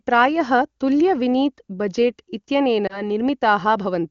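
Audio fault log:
2.87–3.02 s, lost AMR speech frame: the sound briefly dips or warbles, then recovers weak for a moment. The decoder found a corrupted frame and rebuilt it from the last good pitch and vocal tract settings at lowered gain, which fits a single lost 20 ms frame. The smeared, repeated tone and the soft gain dip set it apart from a hard dropout, which would give an abrupt silent gap or a click.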